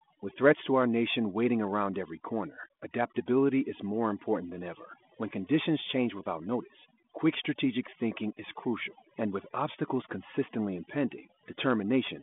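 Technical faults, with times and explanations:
Throughout: overdone noise removal. The background falls to near silence scattered with twinkling specks. A noise reducer set too hard cuts individual frequency bands whenever they sit near its noise estimate, removing quieter speech detail along with them.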